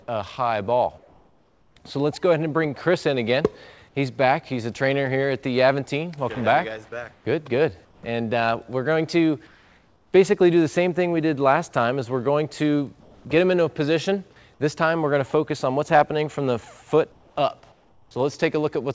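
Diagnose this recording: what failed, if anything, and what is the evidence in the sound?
The quiet background gets swapped for comfort noise in place of the background at 0.98–1.76, 7.13–7.25, 7.85–8.03, 9.47–10.13, 13.01–13.25, 17.12–17.36 and 17.72–18.11 s. Each time the real room tone, already some 31 to 39 dB below the loud parts, flattens into a smooth, detail-free hiss about 2 to 6 dB quieter. That's likely discontinuous transmission in the call processing: the sender goes silent when it detects nothing, and the receiver fills the gap with synthetic noise, all heard through a band that stops at 8 kHz.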